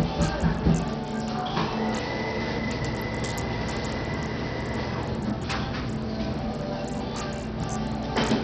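A recording of sounds with one problem running the whole way through: it sounds heavily squeezed by what's likely Bluetooth SBC compression, and a very low bit budget at that, which fits something around 64 kbps. The top end keeps dropping out and flickering back, and there's a gritty, grainy noise riding on everything, plus some aliasing hash. That's the coarse sub-band quantisation starving the upper bands of bits.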